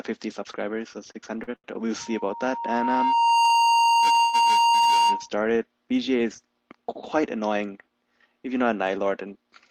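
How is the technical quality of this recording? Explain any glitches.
The recording has four distinct glitches, affecting the audio from about 1.1 s through 5.3 s and again near the end.

From 1.11 to 1.75 s there are repeated stalls (stutter). The audio catches and drags four times, with the longest hold 85 ms. Late packets kept emptying the jitter buffer, so about a third of that span is filled-in continuation.

From 1.99 to 5.29 s a loudspeaker feedback squeal at 931 Hz swells over roughly 1.5 s to about 10 dB above the audio. A microphone was picking up its own loudspeaker, and the loop ran away at that frequency.

From 4.20 to 4.35 s there is a call audio freeze: the sound is stretched into a 129 ms fading hold, then resumes. The likely cause is delayed packets draining the jitter buffer.

From 9.05 to 9.52 s a jitter buffer speed-up makes the audio run at 107% speed, hurried but at unchanged pitch. 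The receiver trimmed about 40 ms of short pitch-period pieces to cut excess buffered delay.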